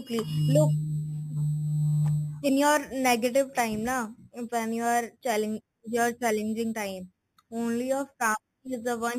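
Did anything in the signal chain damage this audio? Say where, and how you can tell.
Yes. The damage is imaging from sample-and-hold upsampling, introduced at the sample-rate conversion stage. It runs through the whole speech clip. A bright, metallic fizz rides on the speech and rises and falls with its level. The first mirror image sits between 4 and 8 kHz, about 16 dB below the signal. The sound points to an 8 kHz source raised to 44.1 kHz by repeating samples. No smoothing filter removed the spectral copies.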